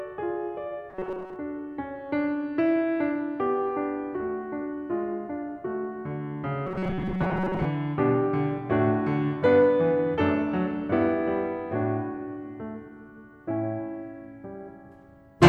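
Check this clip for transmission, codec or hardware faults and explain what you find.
Two short patches of robotic sound from repeated short buffers, from 0.90 to 1.36 s and from 6.67 to 7.65 s. The music goes rigid and metallic, with a fixed buzz at 188 Hz, likely from fresh audio arriving late so playback loops a roughly 5 ms slice for most of that stretch.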